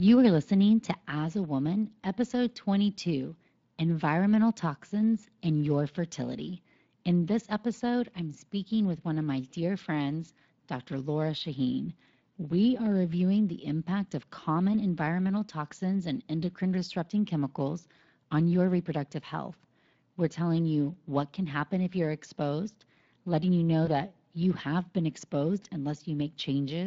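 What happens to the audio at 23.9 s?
Between 23.85 and 23.89 s, just after "exposed letting you know" and before "that you have been", VoIP packet loss concealed by the speech codec fills a gap consistent with one lost 20 ms frame. The decoder extends its last pitch and filter at falling gain, producing a brief stretched sound that fades and shows as a short fading dip in the waveform.

Throughout the clip, and so here too, plainly audible Speex codec damage, which points to a rate around 20 kbps, gives the voice a noisy, hoarse coding texture.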